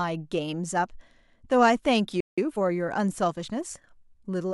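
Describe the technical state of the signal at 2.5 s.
At 2.5 s the speech is in a time-compressed catch-up, running from 2.38 to 2.72 s at about 1.5 times normal speed. The player cuts and cross-fades small pieces to clear a backlog, so it sounds hurried. Unlike a faster playback rate, the pitch stays normal.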